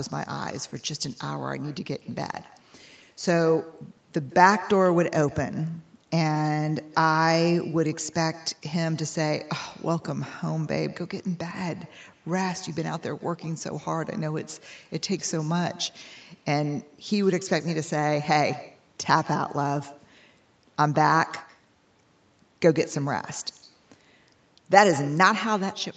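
Throughout the speech, the far end is playing the call on a loudspeaker, its microphone picks that playback up, and no echo canceller removes it, so this is echo with no canceller. After the round trip through the network, every phrase returns roughly 150 ms later, about 19 dB below the direct speech, as a faint, thin shadow trailing each syllable, its top end capped near 8 kHz like the rest of the call audio.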